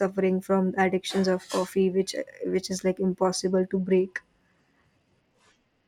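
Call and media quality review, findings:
Bluetooth SBC bit pool drop, 3.45 s to end of clip (5.88 s). Speech loses treble and turns gritty. Probable component: Bluetooth A2DP link, SBC encoder on sending device. Congested link starves upper sub-bands of bits and coarsens quantisation of the rest, consistent with bit pool falling from 31 to 13, near 94 kbps. No recovery before clip ends.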